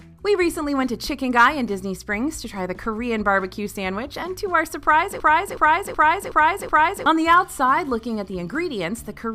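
From 5.20 s to 7.06 s there is a system hang loop. The host or driver stalled while the audio hardware kept replaying the same ring buffer, so a single 0.37 s segment repeats exactly five times at about 2.69 Hz. The loop length fits a 16384-sample buffer. Because the buffer is long, it comes across as a slow, mechanical stutter rather than a buzz. Around two seconds of real audio are missing in place of the repeats.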